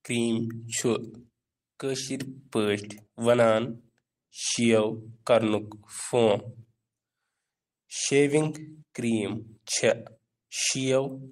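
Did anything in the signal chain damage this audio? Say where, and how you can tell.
No, nothing along the chain left a mark I can hear on this speech, so there's no stage to point to.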